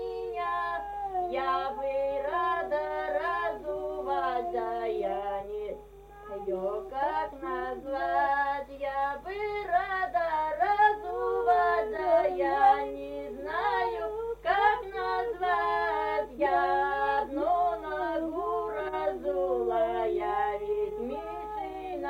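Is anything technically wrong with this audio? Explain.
Yes. Timecode bleed runs throughout: 30 fps linear timecode leaking from an adjacent line adds a faint chirping warble around 1 and 2 kHz, roughly 40 dB below the sound.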